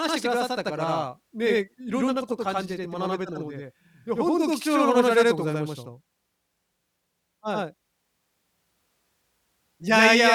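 Throughout the speech, a channel delay (doubling) is present: one channel arrives about 85 ms late, which fits a 4096-sample buffer, producing an equal-level slap echo.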